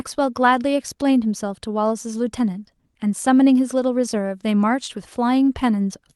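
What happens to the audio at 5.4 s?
Nothing goes wrong at 5.4 s; the speech there comes through intact, carried by the call path's codec without any dropout, glitch or distortion at that moment.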